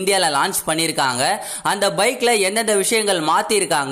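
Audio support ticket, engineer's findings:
Nothing to flag here: listened through the whole ticket clip and didn't hear any technical faults worth chasing.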